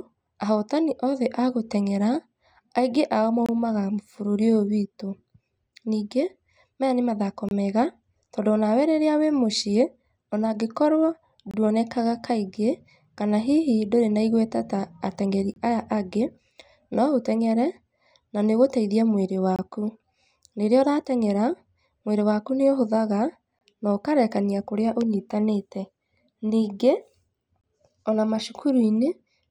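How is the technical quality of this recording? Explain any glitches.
The recording is interrupted by a gap between chunks, recurring seven times: 3.46–3.49, 7.49–7.51, 11.51–11.54, 15.54–15.56, 19.56–19.59, 23.59–23.61 and 27.61–27.64 s. Each is a hard-edged 25 ms hole in the speech, spaced 4 s apart. The regular spacing shows the audio was delivered in 4-second chunks with silence inserted at every join, likely from codec padding or late playback starts. No speech is lost, only interrupted.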